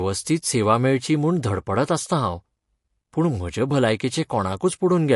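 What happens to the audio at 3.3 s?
At 3.3 s you're hearing the same thing that runs through the whole clip: what's likely MP3 compression, and it's plainly audible. The encoder clearly ran short of bits, which fits a low rate around 48 kbps, so it let weak frequency lines drop in and out from frame to frame, and it also cut everything above 11.3 kHz. That gives the speech a watery, swirly quality, with chirpy s sounds and smeared attacks.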